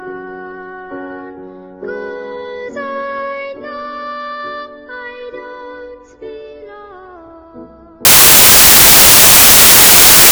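From 8.05 s to the end, the audio turns into samples built from the wrong bytes. The reader has misassembled each sample, whether from a one-byte offset, swapped byte order or a wrong alignment assumption, so the rapidly changing low-order bits land in the most significant positions. This produces loud, harsh broadband noise rather than a degraded version of the sound. Unlike hiss or codec breakup, it starts abruptly and persists to the end instead of sitting beneath the material.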